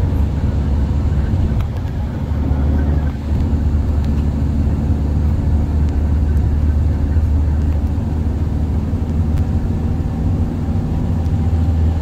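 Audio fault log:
9.37 to 9.39 s, chunks out of order: two adjacent 10 ms chunks of audio trade places, so the one that belongs first plays one chunk late, after the chunk that should follow it. Nothing is dropped, but the sound jumps forward 10 ms, steps back, then jumps forward again, giving three hard joins inside 20 ms. Each join is a waveform discontinuity, so the moment is heard as a brief garbled, jumbled moment.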